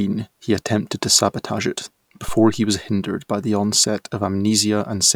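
At 2.28 s a phantom power thump appears. A supply switched on or off on a live input pushes a voltage step through the coupling capacitors, giving a deep thud that peaks at about -16 dBFS, decays within 112 ms and settles by 2.78 s. The waveform shows a broad, lopsided swing, and the spectrogram shows a short burst confined to the lowest frequencies.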